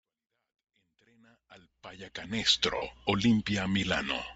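From the start, the speech carries a breathy, grainy edge, with hiss-like texture standing in for real high-frequency detail. The likely cause is Bluetooth LC3 compression at a low rate, consistent with 32 kbps and 7.5 ms frames. On a spectrogram the upper band looks patchy and noise-filled rather than harmonic.

Between 2.77 and 2.82 s, just after the level has finished rising from the fade-in, there are lost LE Audio frames. The roughly 55 ms gap fits about seven 7.5 ms frames. The decoder reuses the last spectrum with scrambled signs, so the sound turns into a brief noisy smear. A spectrogram shows a short block of blurred, harmonic-free energy, and the waveform loses its periodic shape there.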